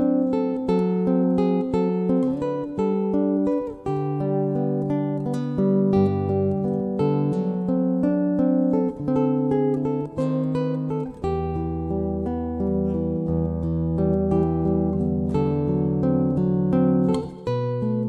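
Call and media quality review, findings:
Nothing stood out on listening; no findings to log for this clip.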